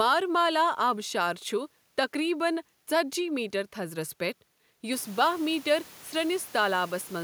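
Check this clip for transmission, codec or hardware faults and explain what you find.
Nothing in the transmission, codec or hardware chain is at fault; the only change is the room's own background noise, which rises by about 23 dB around the five-second mark but stays about 23 dB below the speech, as ordinary room noise does.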